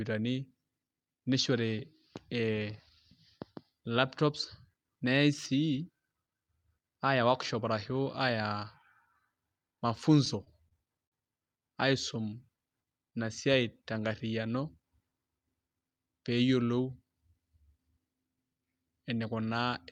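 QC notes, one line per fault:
10.25–11.14 s, repeated stalls (stutter): the jitter buffer ran dry four times as packets arrived late, and the receiver extended the last sound to bridge each gap, 103 ms in all, the longest 49 ms. No speech is lost, but about 12% of this span is filler, so delivery drags and catches.
12.14–12.69 s, jitter buffer slow-down: to build up a reserve, the receiver repeated single pitch periods or bits of pauses to stretch playback by 46 ms, so the speech runs at about 93% speed with unchanged pitch, sounding slightly drawn out.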